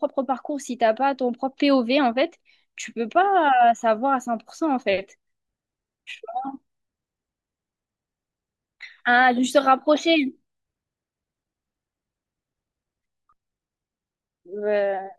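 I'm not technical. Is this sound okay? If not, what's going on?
Yes, it sounds fine.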